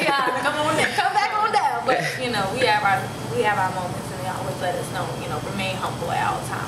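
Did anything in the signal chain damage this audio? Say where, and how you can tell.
Yes. Gain pumping runs through the whole clip, with the gain swinging by around 15 dB. The likely cause is gain set far too high, with a fast limiter pulling it down. Unlike a noise gate, the floor rises rather than cutting off.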